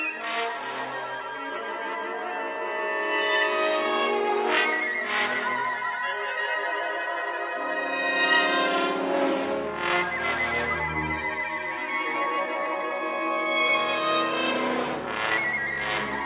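No technical faults can be heard in this audio.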